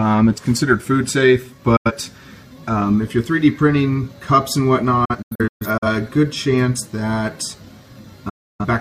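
Digital broadcast dropouts occur three times, each where the receiver stopped getting usable frames and muted. At 1.76 to 1.92 s about 85 ms vanishes; from 5.05 to 5.87 s holes totalling about 341 ms are scattered over 768 ms, the longest 128 ms; at 8.29 to 8.65 s about 299 ms disappears. Each mute fades over 8 ms. The waveform shows flat gaps with brief ramps, and the spectrogram shows blank full-height columns.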